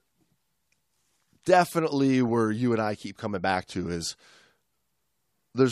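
DAB burbling appears from 2.25 to 2.29 s, a brief patch of burbling over the speech. Weak reception let bit errors, at a rate of a small fraction of a percent, slip past the error correction into the MP2 audio data. Corrupted samples put short blips of noise in single sub-bands, and five frames were hit.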